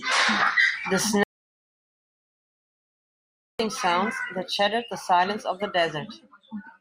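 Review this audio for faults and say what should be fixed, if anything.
An audio dropout to silence runs from 1.23 s to 3.60 s, cutting about 2.36 s of speech mid-flow. The input was likely lost while silence kept being written, so the waveform lies flat and the spectrogram shows a completely blank gap with no room tone. Securing connections and monitoring input levels during recording would prevent it.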